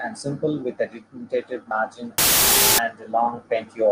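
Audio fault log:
2.18–2.78 s wrong sample width: the sound plays at half speed, an octave low, under loud noise. This points to 32-bit data read as 16-bit, with alternate values made of low bytes. A sample-rate error slows it without noise, and byte-swapping adds noise without slowing it.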